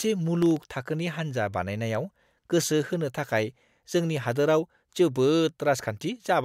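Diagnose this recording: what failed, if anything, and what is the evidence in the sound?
The failure sits at the driver and buffer stage: processor overload crackle from 0.42 to 0.64 s, just before "थाखोनि हान्जा". A gritty tearing rides on the speech there. Several very short buffers, each well under a millisecond, missed their deadline in a row, and each was filled with stale audio. The hard joins at every repeat produce clicks. On a spectrogram this shows as thin vertical broadband streaks, and the waveform shows small step discontinuities and briefly repeated slivers.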